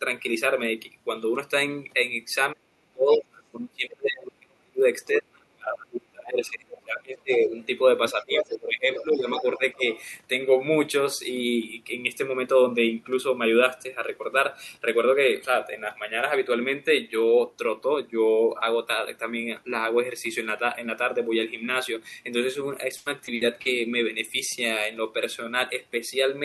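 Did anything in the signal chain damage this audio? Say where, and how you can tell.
Yes. The call processing stage is the likely cause: the echo canceller could not tell the near talker from loudspeaker echo while both sides spoke, and turned both down. This speech suppressed in double talk runs from 2.53 to 7.52 s, with roughly four seconds affected and dips of around 30 dB at the deepest. It returns from 8.13 to 9.88 s, covering about 1.5 s, with shallower drops of around 15 dB.

In the same stage, the echo canceller likely failed to remove all of the loudspeaker's pickup, so the other side's voice is leaking through. It comes in as short scraps at 7.31 to 7.65 s (about 20 dB under the talker), 8.09 to 8.58 s (only about 5 dB under, the most obvious), 8.96 to 9.05 s and 9.38 to 9.42 s (about 10 dB under), and 9.74 to 10.04 s (about 35 dB under, barely there).

On the network side, repeated packet loss (robotic sound) hits from 22.97 to 23.67 s. 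Four holes open in that 0.7 s span, the longest 80 ms. Concealment patches 200 ms of them by extending the last sound, while another 200 ms is simply missing. Since 29% of the stretch is concealed, the audio comes out choppy there.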